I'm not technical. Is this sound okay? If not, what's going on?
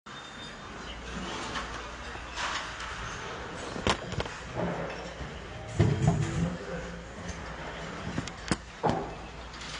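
No, it's not quite right. From start to finish it has the dull, smeared quality of heavy AAC compression. The crisp top end is dulled, and the damage is plainly audible: sustained parts have a warble and hissy bits turn fizzy. That points to the audio likely having been squeezed too hard to save space at some point.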